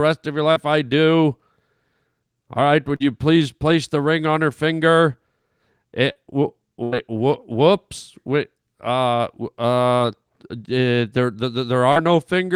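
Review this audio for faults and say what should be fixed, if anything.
Brief smears or wobbles, each replacing about 40 ms of speech, occur at 0.51–0.59, 2.96–3.03, 6.12–6.18, 9.96–10.03 and 11.92–11.99 s. This is short concealed packet loss: a packet arrived too late or not at all, and the receiver extended the preceding sound before blending back into real audio. Prevent it with a larger jitter buffer or forward error correction.

At 6.83–6.95 s the sound stretches into a held, fading tail. Then speech resumes further on, with about 80 ms gone. This is a burst of packet loss: consecutive packets were missing, so concealment continued the last sound and turned it down. Prevent it with redundancy or interleaving on the network link.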